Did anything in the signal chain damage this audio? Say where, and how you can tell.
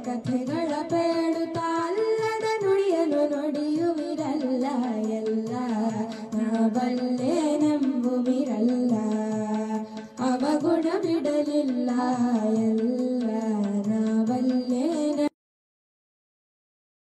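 Yes. At 2.74 and 11.94 s the sound jumps ahead, losing roughly 150 and 200 ms: compressed frames skipped at the codec, a few 46.4 ms frames each.

At 15.28 s the audio stops mid-sound and falls straight to digital silence with no decay: a cut-off end, where the final buffers were never written or played.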